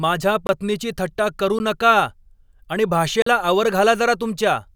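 Short holes interrupt the speech at 0.47 to 0.49 s, just before "थट्टा करू नका", at 1.59 s after "थट्टा करू", where the briefer gap is heard as a tick or dip, and at 3.22 to 3.26 s. Each is a block of digital silence: the output buffer went unfilled, fitting 1024- and 2048-sample buffers, so the signal drops out and back without any fade.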